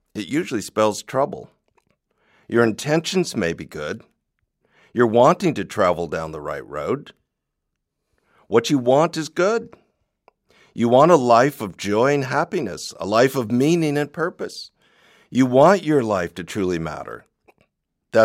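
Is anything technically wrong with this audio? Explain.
No, no technical faults heard.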